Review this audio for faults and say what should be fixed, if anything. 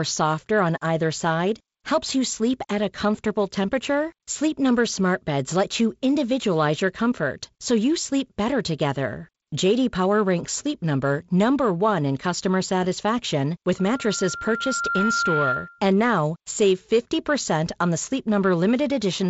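A loudspeaker feedback squeal runs from 13.78 to 15.85 s, starting after "in customer satisfaction with" and ending before "now save". The microphone picks up its own loudspeaker, and loop gain above unity at 1.4 kHz makes that tone swell over about one and a half seconds to roughly speech level. To prevent it, reduce microphone gain, reposition the microphone or loudspeaker, or notch 1.4 kHz.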